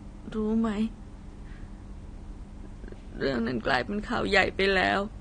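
From start to finish the speech carries AAC compression damage, plainly audible: nothing reaches above 9.7 kHz, so sibilants lose their top and sound dull and smeared, with a fizzy, warbling edge on sustained sounds. The likely cause is AAC-LC coding at a low bitrate, which fits about 32 kbps, where the encoder drops quiet frequency bands to save bits. A spectrogram shows a hard ceiling at 9.7 kHz and patchy holes in the upper bands.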